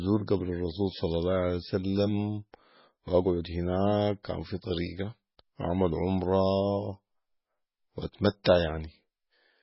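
It's a speech recording, and the whole thing carries that watery, swirly MP3 compression sound, with nothing above 5.6 kHz, which points to a likely very low bitrate, around 16 kbps. At 8.44 s there's a brief pre-echo: a hiss smeared about 14 ms ahead of a sharp attack, softening its onset.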